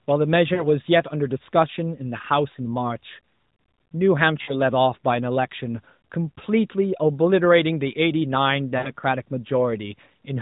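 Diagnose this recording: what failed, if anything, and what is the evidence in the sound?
Network-stage fault: lost AMR speech frames. At 0.54 to 0.67 s, 4.42 to 4.54 s and 8.78 to 8.90 s the speech briefly smears into a held, fading buzz before recovering roughly. The gaps, about 40 ms and then 60 ms twice, fit runs of two and three 20 ms frames. Corrupted frames failed their checksum, so the decoder extrapolated from the last good pitch and vocal-tract parameters with decaying gain. The surrounding narrowband sound, capped at 4 kHz, points to AMR-NB at 12.2 kbps.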